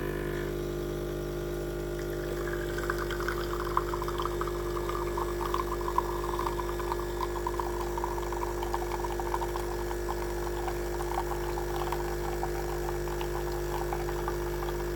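No technical faults are audible.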